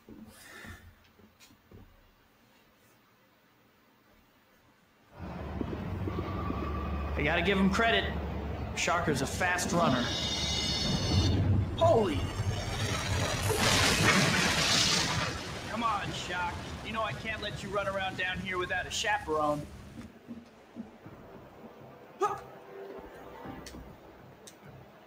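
Throughout, the level pumps and thins, with sustained parts swelling and sinking by around 10 dB while sharp onsets pass cleanly. This is a noise suppressor applied to music or sounds: a speech-oriented processor is mistaking steady content and tails for noise. At 0.95–1.71 s, 2.1–5.1 s, 15.33–17.71 s, 19.64–22.2 s and from 23.94 s to the end, held tones sag by up to about 5 dB and decays cut off early. This is sound cut by the noise suppressor, which clamps harder on those stretches.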